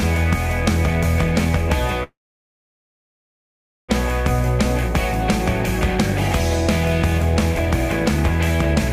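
At 2.03 s there's a call audio freeze lasting until 3.91 s: the last bit of sound smears into a brief fading buzz, then about 1.75 s of silence. It's likely packets stalled and the jitter buffer ran dry. Nothing is lost; playback resumes where it stopped, just 1.85 s late.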